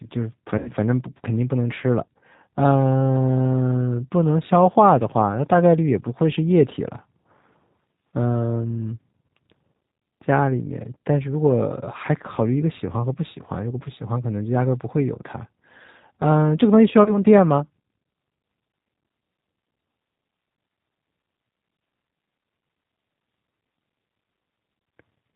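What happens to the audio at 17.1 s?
From 17.04 to 17.19 s, VoIP packet loss concealed by the speech codec: about 20 ms, likely one lost packet, is replaced by the decoder extrapolating its last pitch and filter. The result is a brief buzzy tone or coloured noise that fades, rather than the abrupt silence of a plain dropout, and the sound stays weak briefly after. Underneath, the G.729 codec's rough, synthetic, band-limited quality, which fits 8 kbit/s, continues steadily.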